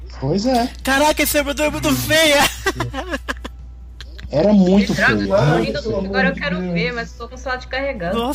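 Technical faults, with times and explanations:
No technical faults can be heard in this clip.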